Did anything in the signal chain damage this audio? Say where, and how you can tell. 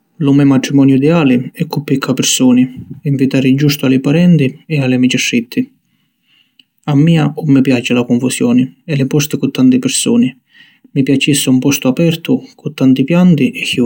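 No, nothing in this speech recording shows damage from any stage of the signal chain. There is no event at any point that ties back to wiring, conversion, processing, transmission, storage or playback.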